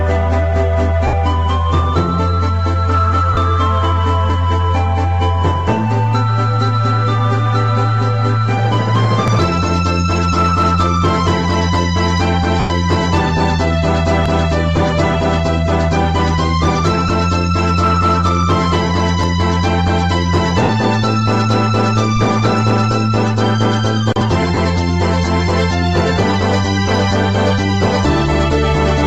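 Lost LE Audio frames come first, at 1.07 to 1.13 s (60 ms) and 3.33 to 3.37 s (40 ms). The Bluetooth LE Audio link dropped frames, and the LC3 decoder covered each gap by reusing the last good spectrum with randomised signs, fading it as the loss went on. Tonal parts turn into a brief noisy smear instead of a clean dropout. The 40 ms gap fits four 10 ms frames.

At 4.30 s the audio jumps: a very short piece, around 20 ms, is missing, and the two sides are butted together with no silence. The same skip returns at 9.28, 14.26, 19.24 and 24.21 s, every 5 s. That regular spacing points to audio missing between chunks, most likely a recorder or processor that works in 5 s blocks and drops a sliver each time it closes one block and opens the next.

Between those skips, lost LE Audio frames recur at 12.60 to 12.70 s, 17.08 to 17.10 s, 20.63 to 20.69 s and 24.55 to 24.57 s. The 12.60 s loss lasts 100 ms, the longest in the clip, so the concealment is stretched furthest there. 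The 60 ms loss at 20.63 s matches the one at 1.07 s in length. The 20 ms losses at 17.08 and 24.55 s are the shortest smears, and the second comes just after the chunk skip at 24.21 s.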